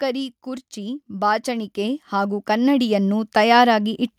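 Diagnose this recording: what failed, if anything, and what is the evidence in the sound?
Call processing fault: automatic gain rising from 0.43 to 4.08 s lifts speech and background together by about 12 dB, a steady upward ramp in the waveform envelope.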